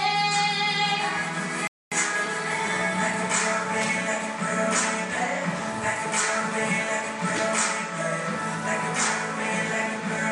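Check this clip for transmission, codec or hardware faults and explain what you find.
One transmission fault is present. From 1.67 to 1.92 s the sound drops to silence for about 243 ms, then picks up exactly where it left off with nothing missing. This is a rebuffering stall: the player exhausted its downloaded audio and paused until more arrived, adding time without losing content.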